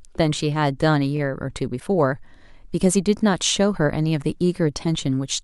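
From 1.76 to 1.82 s, damaged data in the compressed stream makes the decoder lose sync, giving a brief chirp, squawk, click or short hole, irregular rather than periodic like chunk seams. At 3.19 to 3.21 s, overlapping chunks replay 20 ms at a 2 s chunk join, heard as a click or stutter with no garbled tone.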